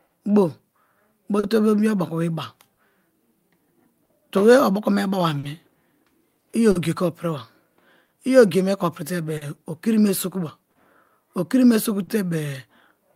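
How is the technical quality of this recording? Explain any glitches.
The speech in this recording is marred by two timing faults, one running throughout and one appearing as repeated short dropouts.

Clock drift between sender and receiver affects the whole clip. The sender's clock runs roughly 3% slow, so the jitter buffer keeps draining and the receiver repeatedly stretches or repeats short pieces. This produces small, unevenly spaced timing hiccups.

Scattered short gaps occur from 0.07 s to 12.09 s. About ten lost or late packets, the longest around 40 ms, were each patched by continuing the preceding sound, roughly 400 ms in total. They are heard as brief ticks, smears or hiccups in otherwise clear speech.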